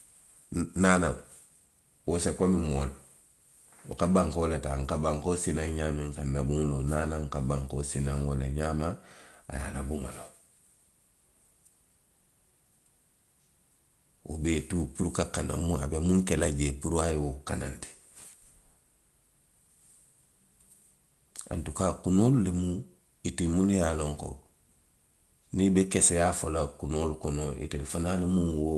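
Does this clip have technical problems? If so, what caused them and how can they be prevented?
No, this speech has no technical faults; it passed through a call codec whose top end stops at around 12 kHz, as expected for that path.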